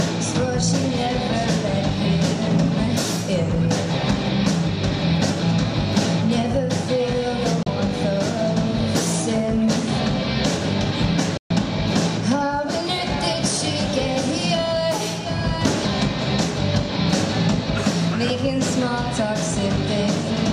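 Digital broadcast dropouts cut the audio at 7.63 to 7.67 s and again at 11.37 to 11.51 s. Each time the receiver lost the signal or rejected corrupted frames and muted with a fast 3 ms fade until clean data resumed, leaving gaps of 32 ms and 128 ms that fit one and four lost frames.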